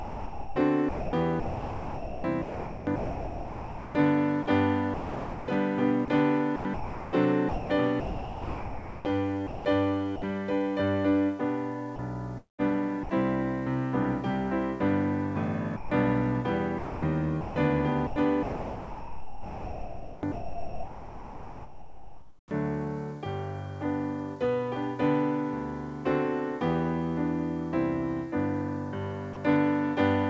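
From 0 to 5.48 s, 6.05 to 9.65 s, 11.96 to 13.09 s, 16.78 to 17.56 s and 18.07 to 22.87 s, the sound is chopped, likely by the sender's voice detector gating repeatedly. Quiet parts give way to comfort noise.

Brief dropouts at 10.16 to 10.22 s, 15.76 to 15.91 s and 29.33 to 29.36 s, lasting 60 ms, 150 ms and 30 ms, are sound dropped by the voice detector, likely because it took a quiet moment for background. Steady comfort noise fills each gap until the sound resumes.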